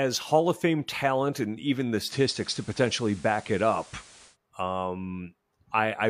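Just after "talent and even the", at 2.03 s, the sound shows digital radio blending to analogue: the receiver lost its digital stream and cross-faded over about 128 ms to the station's FM broadcast, returning at 4.37 s. Level holds steady, but a hiss floor appears roughly 25 dB under the speech. That added hiss and the short, smooth cross-fade at each end set it apart from a plain codec bitrate drop.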